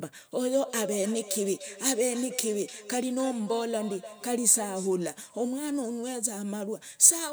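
From 0.49 s to 4.97 s the speech is trailed by feedback echo between two devices: a second device in the same room replays the call, and this microphone picks that playback up again, which its own echo canceller cannot remove. Each phrase returns roughly a third of a second later, thinner and ringing, at about 14 dB below the speech at its loudest. A spectrogram shows faint, time-shifted copies of each syllable's pattern.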